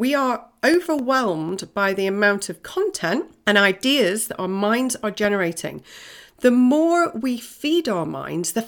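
CD scratch ticks run from 0.74 to 1.99 s: six brief clicks, the longest about 2 milliseconds, where a scratch defeats error correction once per disc revolution.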